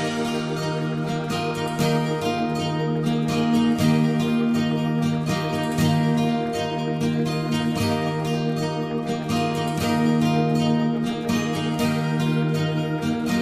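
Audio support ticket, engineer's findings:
No audible faults found on listening; nothing to escalate.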